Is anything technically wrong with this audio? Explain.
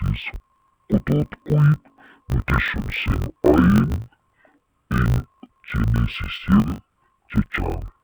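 Yes. Throughout the speech, the audio has been read as planar when it is actually interleaved. In each 20 ms block, the alternating left and right samples get split into halves, and both halves play at half speed. That drops the pitch an octave and adds a 50 Hz buzz. Unlike a sample-rate mismatch, the pace of the speech stays correct.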